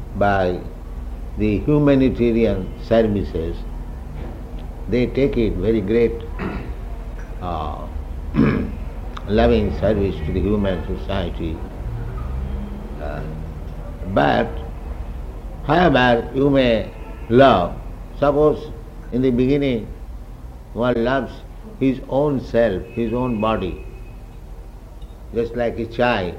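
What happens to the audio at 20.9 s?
A corrupt frame is concealed from 20.93 to 20.96 s: the decoder caught damaged data and covered it, fitting one lost AAC frame.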